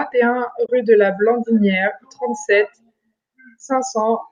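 A soft-edged gap opens from 0.66 to 0.69 s, between "et un" and "rue de la", fading out and back in. This is AAC frame loss with muting. The decoder zeroed the missing spectrum, which fits about three lost 10 ms frames of the likely low-delay AAC stream.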